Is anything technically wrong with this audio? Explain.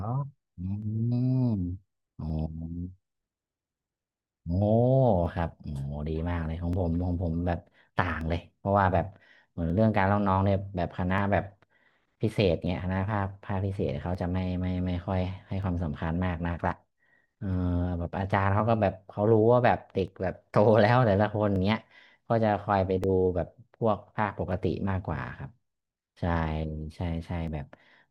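Yes. Clock drift buffer slips run from 0.82 to 27.48 s, about twenty of them, every 1.48 s. Two mismatched clocks, likely off by roughly 700 ppm, let a buffer drift until roughly 50 samples are dropped or repeated, giving a regular click through the speech.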